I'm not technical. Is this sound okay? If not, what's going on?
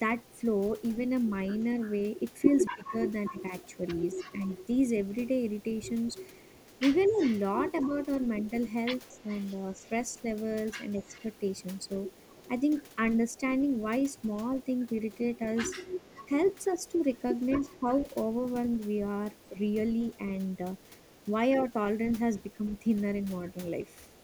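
No. There is an echo leak. The other end of the call was likely on a loudspeaker, and its echo canceller let some of the sound back through. You hear a faint copy of the speech about a quarter of a second late, briefly at 0.21–0.4 s and then from 1.55 s to the end.

There is also speech suppressed in double talk. When both sides spoke at once, the echo canceller likely mistook the talker for echo and turned them down. The speech dips noticeably at 2.41–3.52 s and 7.08–7.92 s, and more slightly at 9.23–9.77 s, 16.98–18.07 s and 19.51–19.55 s.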